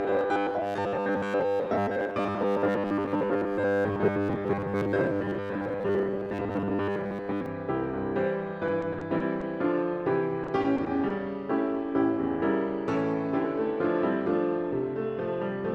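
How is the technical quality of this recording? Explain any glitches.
The recording has two clear problems: a long robotic buzz at the start and two short bursts of choppy, broken sound later on.

Robotic sound from repeated short buffers runs from 0.01 to 7.46 s. The sound is stuck to a rigid, metallic 100 Hz buzz that only loosely follows the material, with most of the real audio skipped. The likely cause is the playback repeating a tiny slice of audio, which fits a buffer of about 10 ms, because fresh data arrived too slowly.

Repeated packet loss (robotic sound) appears from 8.67 to 9.43 s and again from 10.43 to 11.12 s. Each stretch has about half a dozen brief holes, the longest 30 ms and 20 ms. Each hole was patched by stretching the preceding sound, about 120 ms and 110 ms of it, while 60 ms and 80 ms went missing. The result sounds choppy, with pieces missing.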